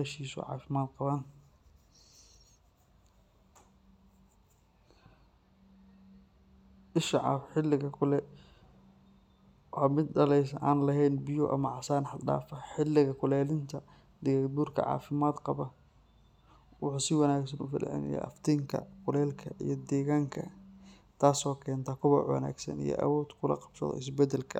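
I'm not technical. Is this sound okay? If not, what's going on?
Yes, this sound is okay, and there's nothing going wrong with it.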